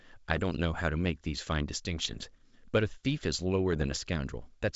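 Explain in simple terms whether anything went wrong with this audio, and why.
Three short bursts of damage occur, at 0.30 to 0.43 s, 2.03 to 2.30 s and 3.73 to 3.99 s. These are bit errors on an ADPCM link. A few stray bits, a small fraction of a percent, were flipped in transmission. Because this coding predicts each sample from the previous ones, one wrong bit throws the decoder off briefly, producing pops, rough crackle and quick jumps in loudness until it settles. The G.722 wideband coding itself sounds clean.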